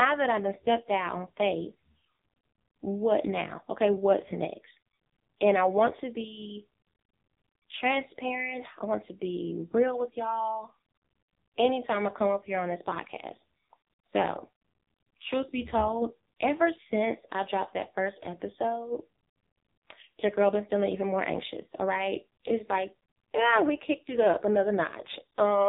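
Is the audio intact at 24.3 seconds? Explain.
No. At 24.3 seconds, as throughout the clip, the speech carries AMR narrowband mobile codec damage. Nothing above 3.8 kHz survives, and the heavy, buzzy, synthetic quality of the vocal-tract model, rebuilt from a few pulses per subframe, points to a low rate near 5.9 kbps.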